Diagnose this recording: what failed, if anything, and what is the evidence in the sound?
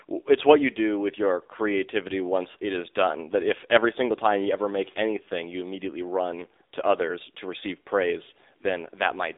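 The fault sits at the codec stage: the speech has been through the AMR narrowband mobile codec (AMR-NB) at a low rate. For the whole clip nothing is heard above about 3.8 kHz, and the band runs roughly 300 Hz to 3.7 kHz, as on a phone line. The voice is plainly buzzy and synthetic, which fits a rate around 7.4 kbps: too few excitation pulses per 5 ms subframe to rebuild the natural vocal texture.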